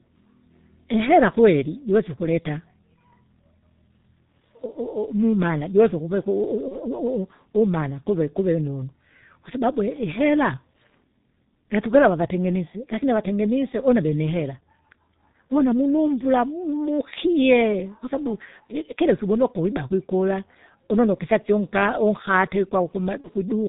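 Throughout, the speech carries heavy G.723.1 codec damage: nothing above 4 kHz, a muffled, hoarse quality and smeared consonants. The low rate, consistent with the 6.3 kbit/s mode, models the voice in coarse 30 ms frames, so the grain is steady rather than fluttery like a bandwidth-switching codec.

From 6.68 to 6.77 s and again from 23.21 to 23.29 s there is VoIP packet loss concealed by the speech codec. Each gap sounds like the loss of a single 30 ms frame, which the decoder filled by repeating its last pitch and filter at falling gain. Each event brings a brief fading smear of buzz or coloured noise instead of silence or a click, and the voice stays weakened for tens of milliseconds past each gap while the decoder recovers.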